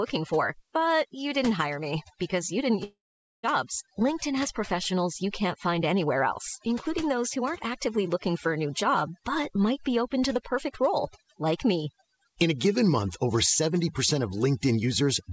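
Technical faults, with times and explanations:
Throughout: overdone noise removal. A noise reducer set too strong mutes bands near its noise estimate, so the background breaks into twinkling, warbling specks and quiet speech thins out.
2.84 to 3.45 s: long network dropout, likely. Audio stopped arriving, so the receiver stretched the last sound into a fading buzz, then about half a second of silence. About 600 ms never returns.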